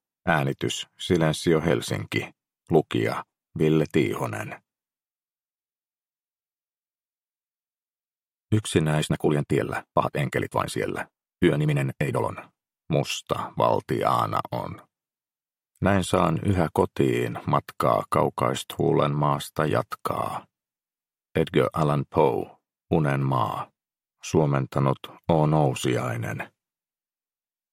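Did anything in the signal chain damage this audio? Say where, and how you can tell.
Yes. From 8.95 to 12.33 s there is a time-stretched section, sped up about 1.87 times with unchanged pitch, so it sounds rushed. The cause is likely length-fitting software that drops short slices. The waveform shows compressed, jump-spliced segments, and the spectrogram shows harmonics that stay level while events crowd closer together.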